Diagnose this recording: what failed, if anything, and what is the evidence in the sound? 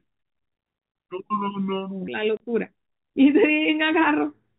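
The first 2.08 s of speech play at 0.721 times normal speed, so pitch and tempo drop together by about five semitones. That points to a section at the wrong speed, likely from playback or editing on the wrong clock. Pitch-shifting alone would leave timing intact.

At 2.37 s to 2.4 s a 30 ms hole of silence cuts the speech, with abrupt edges. This is packet loss filled with silence on the network path, matching one lost packet. A hard gap, not a fade or a smeared concealment, is what sets it apart. The narrowband G.711 telephone band can be heard through it.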